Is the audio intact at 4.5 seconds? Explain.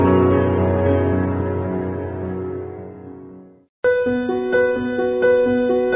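Yes, the audio at 4.5 seconds is intact, with no dropout, click, distortion or other fault at that moment.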